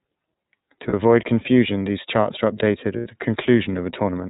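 Throughout, the speech sounds narrow and muffled, with nothing above 4 kHz, and carries a plainly audible rough, slightly synthetic edge. This is the iLBC codec at work. It is a narrowband VoIP coder that rebuilds the excitation of each frame independently, and the texture here fits its 30 ms frame mode at 13.33 kbps. That coding discards the upper band and smooths away some natural detail.

At 0.89 s the sound briefly freezes into a short held, faintly buzzy tone lasting 30 ms, consistent with a single lost iLBC frame. The decoder covered the gap by repeating the last pitch cycle mixed with noise. Because each iLBC frame stands alone, the speech snaps back immediately afterward.

From 2.96 to 3.07 s the same lost iLBC frames effect returns for longer, about 90 ms, pointing to three consecutive missing frames. The concealment is heard as a stretched, breathy, vowel-like drone that fades as the repeated cycle wears thin, before clean decoding resumes at the next intact frame.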